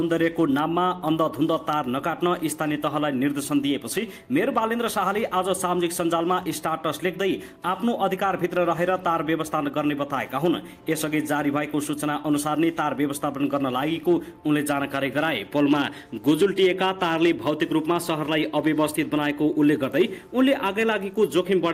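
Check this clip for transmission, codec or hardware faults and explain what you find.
Nothing stood out on listening to this clip.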